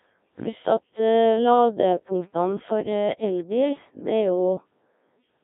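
Throughout, Codec 2 vocoder resynthesis at a rate fitting 1.3 kbit/s rebuilds speech from sine waves, sounding robotic and buzzy; spectrograms show harmonics within 200 Hz to 3.7 kHz.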